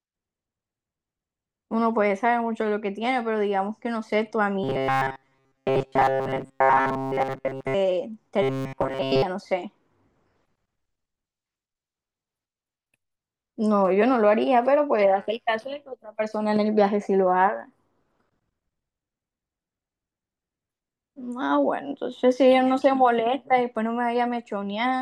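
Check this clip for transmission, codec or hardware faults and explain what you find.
Two stretches of robotic sound from repeated short buffers occur, from 4.64 to 7.75 s and from 8.42 to 9.22 s. Most of the real speech there is likely skipped as the last few milliseconds are replayed, imposing a rigid 134 Hz metallic buzz (about a 7.5 ms buffer). Unlike codec warbling, this pitch stays fixed regardless of the speaker's intonation.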